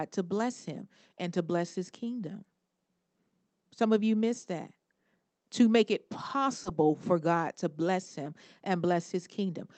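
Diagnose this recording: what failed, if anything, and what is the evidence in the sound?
Short concealed packet loss at the network stage: at 6.63 to 6.67 s, about 20 ms of speech is smeared over by extrapolated sound, not cut to silence as a buffer dropout would be.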